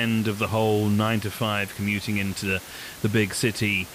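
There are no technical faults to describe in time order, only the room's own background noise sitting about 17 dB below the speech.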